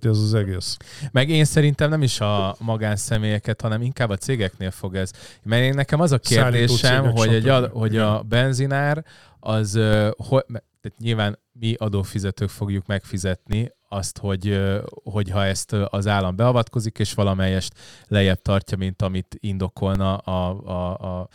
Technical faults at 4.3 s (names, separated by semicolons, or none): none